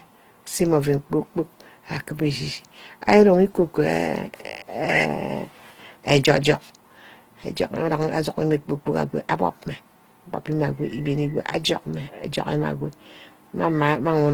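From start to finish the speech has a grainy, rough texture. That's plainly audible Opus compression, likely in its music (CELT) mode at a low rate around 16 kbps: band energies survive but the fine detail is filled in with noise. Content still reaches about 20.2 kHz.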